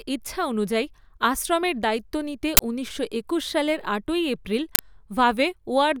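At 2.57–2.59 s, right after "অনুযায়ী আশ্রমের দায়িত্ব নিতে", and again at 4.75–4.79 s, after "একুশ সালের আটই এপ্রিল", an uninitialised buffer plays stale memory as audio: 20 ms and 40 ms loud digital-noise bursts, seen as tall waveform blocks and bright broadband spectrogram columns.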